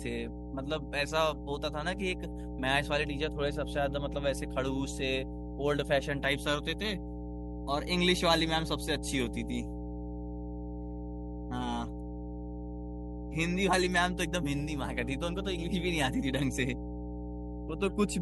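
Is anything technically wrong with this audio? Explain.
Yes, there is mains hum. Throughout the speech, a ground loop or nearby transformer leaks the 60 Hz power line into the signal, so a steady low drone sits only slightly below the voice. A spectrogram shows an unbroken horizontal line at 60 Hz with fainter harmonics above it.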